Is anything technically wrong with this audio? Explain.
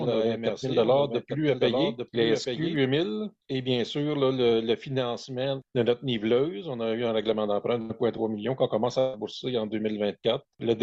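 Yes, there are two problems. From the start until 2.76 s there is a doubled audio track. A second copy of the sound runs about a second behind and about 5 dB quieter. It is full-band and dry, with no decay. It likely comes from a second, slower capture path. It cuts off abruptly.

There is also a burst of packet loss at 7.81 to 7.92 s and again at 8.99 to 9.15 s. The last sound is held and fades, for 81 ms and then 136 ms. Playback then jumps ahead, skipping about 80 ms and 140 ms of audio.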